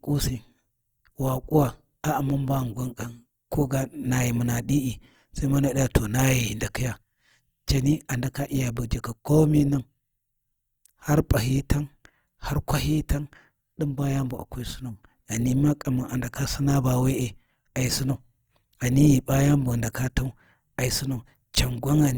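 Across the whole clip, the speech has likely passed through Opus compression in its music (CELT) mode at a low rate, with damage consistent with something around 24 kbps. Short of bits, the encoder keeps each band's energy but refills much of the detail with folded or noise-like content, so voiced sounds come out grainy, rough and noisy rather than swirling. The bandwidth stays full, with content reaching about 20.4 kHz, and the damage is plainly audible throughout.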